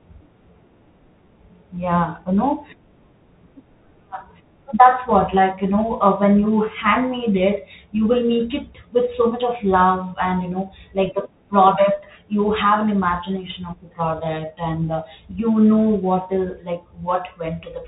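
Throughout, the speech runs through a Bluetooth CVSD headset codec; its one-bit coding removes everything above 3.8 kHz, leaving scratchy s sounds and granular hiss.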